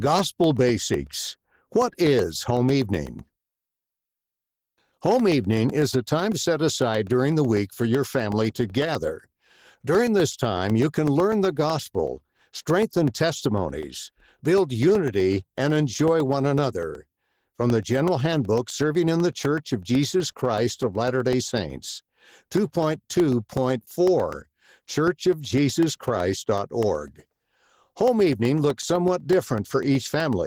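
Opus voice compression runs through the whole speech clip and is plainly audible. The voice takes on a hoarse, slightly robotic grain, which fits a low rate of around 16 kbps. The band is not narrowed: content reaches up to about 20.2 kHz. That, with the texture, points to Opus in hybrid mode. The linear-prediction layer codes the band below 8 kHz with coarse excitation, and a transform layer fills in above it, in 20 ms frames.

Periodic USB or driver dropouts run from 0.07 s to 30.33 s. Every 0.125 s, eight times per second, roughly a millisecond of audio is lost and replaced by silence, around 200 gaps in all. Something is blocking the bus or driver on a fixed schedule. The result is an even train of small ticks that can be heard wherever the speech has level and fall silent in pauses.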